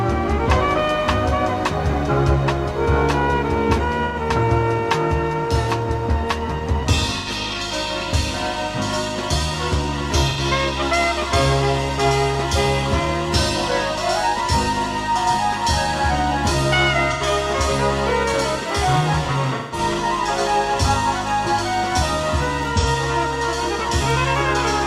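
At 4.06, 7.18, 10.29 and 17.12 s there is AAC frame loss with concealment. Each gap lasts about 85 ms, which fits two lost frames, and the decoder patches it from the last good spectrum, so it sounds like a brief smeared, phasey blur. At 18.69 s a bit error spike gives one sharp, broadband tick. Unlike the concealment patches, it lasts a single sample and bears no relation to the sound around it. Frame loss returns at 19.55 to 19.79 s for about 170 ms, the longest patch, then at 22.79 s for about 43 ms. A second tick comes at 24.10 s.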